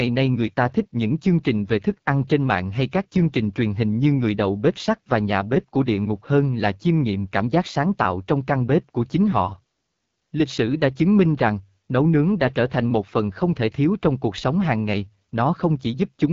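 Rough, raspy speech runs through the whole clip, with nothing at all above about 7.6 kHz. These are the marks of the AMR wideband (HD Voice) codec at one of its lowest rates, consistent with 8.85 kbit/s. At that rate the pulse-driven vocal tract model has too few bits to rebuild speech faithfully up to 6.4 kHz, and the band above is filled with shaped noise rather than real detail.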